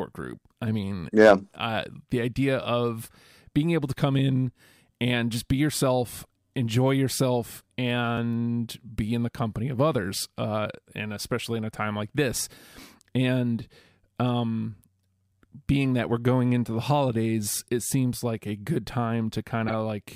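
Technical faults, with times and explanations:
19.68 to 19.74 s, corrupt frame decoded: a brief glitch breaks into the speech near the end. Damaged bits in the compressed stream were decoded anyway, so energy landed at wrong frequencies. It lasts about 60 ms, which fits a few frames, and peaks around -15 dBFS.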